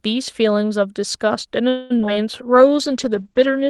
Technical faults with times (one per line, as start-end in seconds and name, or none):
1.69-1.92 call audio freeze
1.98-2.09 repeated packet loss (robotic sound)
2.44-3.30 jitter buffer slow-down
2.56-3.69 call bitrate drop